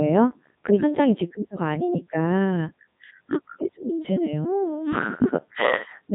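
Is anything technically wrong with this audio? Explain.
Yes. The speech carries Codec 2 vocoder damage throughout the clip, and it is heavy. The decoder discards the original waveform and rebuilds the speech from sine waves, driven by pitch, voicing, energy and a coarse spectral envelope. The result sounds robotic and buzzy, in a way that fits Codec 2's 3.2 kbit/s mode. A spectrogram shows nothing above 3.8 kHz and unnaturally regular harmonic stripes. The waveform has lost its natural fine detail.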